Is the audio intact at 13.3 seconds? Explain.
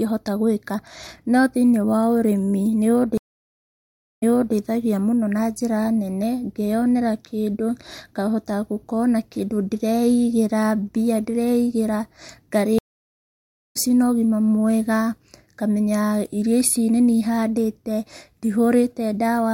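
No. At 13.3 seconds the speech has dropped out entirely: a gap of about 0.91 s runs from 12.79 to 13.77 s, and when the sound comes back it picks up roughly a second further on, so a stretch of speech is simply skipped. This is a stream reconnect. The connection broke, the player fell silent, re-established the link and started a fresh decoder mid-stream, joining the live feed at a later point.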